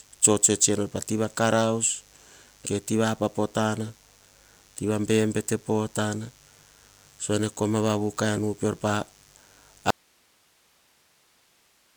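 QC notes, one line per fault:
Throughout: mains buzz. A steady, raspy buzz sits about 35 dB below the speech, built on 50 Hz with a dense ladder of harmonics reaching into the kilohertz range. Sharp switching spikes twice per mains cycle, from a dimmer, rectifier or missing shield, cause it. A spectrogram shows evenly spaced horizontal lines at 50 Hz multiples across the whole clip.
9.91 to 11.97 s: audio dropout to a faint residue. The speech cuts off abruptly and does not return before the end. Only hiss remains, at roughly 40 dB below the speech. Likely the wanted signal was lost while the path after the break stayed live. The waveform collapses to a thin noise band.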